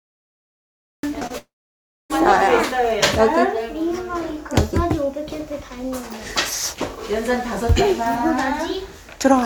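A cut-off start runs from 0.00 to 1.03 s: the file holds digital silence until 1.03 s, and the sound then appears abruptly, already in progress. There is no attack or fade-in, because capture or streaming began after the sound had started, so its opening was never recorded. The transition is a hard step from nothing to full level.

Short concealed packet loss follows twice, at 1.19 to 1.23 s and at 1.27 to 1.32 s. Each time, about 20 ms of audio failed to reach the decoder in time. The receiver filled the gap by extending what it had just played, for roughly 14 ms in the first case and 30 ms in the second, then crossfaded back to the real signal. Each event is heard as a brief smear or flutter, and the two fall close together.

A long dropout covers 1.38 to 2.12 s, likely caused by the network. About 0.72 s of audio never arrived. The receiver first stretched the last sound into a fading synthetic continuation, and after that roughly 0.61 s is silence. 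The audio resumes at 2.12 s, and the missing stretch is skipped rather than replayed.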